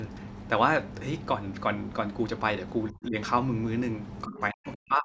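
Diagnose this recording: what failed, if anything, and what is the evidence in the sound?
In the call processing stage, the echo canceller likely mistook the talker for loudspeaker echo and turned both down, so this is speech suppressed in double talk. The speech drops by around 20 dB from 2.92 to 3.15 s. From 4.26 s to the end at 5.04 s it falls much deeper, by around 40 dB.

The same call processing stage failed to cancel all of the far end's loudspeaker sound picked up by the microphone. The other side's voice leaking through appears as a brief scrap from 4.67 to 4.71 s, about 25 dB below the talker. This is likely residual echo that slipped past the canceller.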